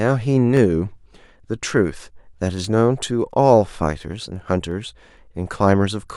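From 0.57 s to 6.09 s a click recurs every 0.69 s, about ten times. These are clock drift buffer slips, likely from two clocks differing by around 300 ppm, so a handful of samples get dropped or repeated. Unlike random dropouts, the clicks keep strictly even spacing.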